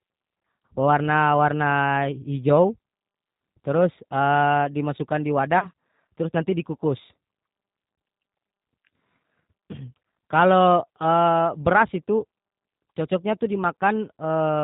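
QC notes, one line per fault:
throughout: G.729 codec. Nothing above 4 kHz, with a rough, slightly synthetic texture from pulse-built excitation, which fits an 8 kbit/s stream. This is not simple low-pass filtering.
5.59–5.67 s: VoIP packet loss concealed by the speech codec. A 30 ms loss, which fits one packet, is filled with a fading extrapolation instead of silence. The sound stays weak briefly as frames rebuild.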